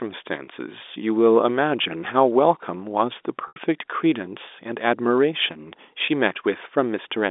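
Packet loss with pitch repetition occurs twice. At 3.48 to 3.56 s, about 80 ms of audio went missing, consistent with four lost 20 ms packets. The receiver bridged the gap by repeating the last pitch period, so the sound holds a slightly buzzy, frozen tone that then fades. A shorter 20 ms loss at 6.06 to 6.08 s, likely one packet, is concealed the same way and comes across as a brief held buzz over the narrow G.711 telephone band.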